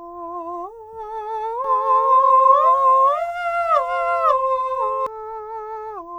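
From 1.64 to 5.06 s the music carries a doubled audio track. A second full-band copy trails by about half a second, roughly as loud, starting and stopping abruptly. This is likely a duplicate capture path.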